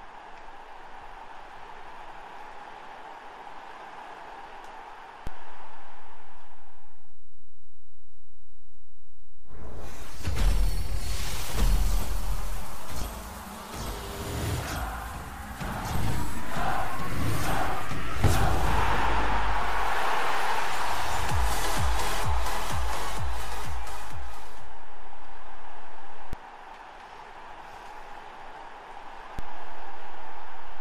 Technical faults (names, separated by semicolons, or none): DC step